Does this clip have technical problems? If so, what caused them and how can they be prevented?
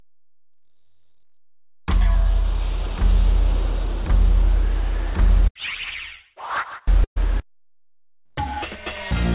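Yes, there's a burst of packet loss from 7.04 to 7.18 s. Roughly 120 ms of audio never arrived in time, so the receiver carried the last sound forward and faded it, going quiet for the final 80 ms before resuming further on with that stretch missing. Nothing above 4 kHz comes through, which fits a G.711 call path. Prevent the dropout with a steadier network link, a deeper jitter buffer or forward error correction.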